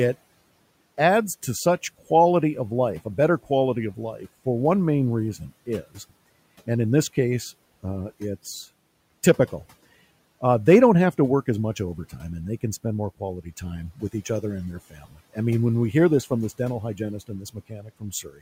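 Speech drops out twice, sounding swallowed: at 14.9–15.37 s after "each other and their" and at 17.28 s to the end after "from this dental hygienist". Speech cut by the noise suppressor pulled these quiet stretches down about 16 dB along with the room noise, which sits about 27 dB below the speech.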